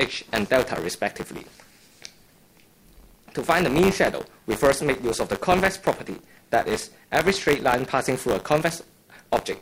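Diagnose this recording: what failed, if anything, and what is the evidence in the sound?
Buffer tearing at the buffer stage: a steady 100 Hz rattle under the signal, from a small slice of each period replaying audio about 20 ms old. It shows as 100 Hz vertical striping on a spectrogram and as hard waveform steps.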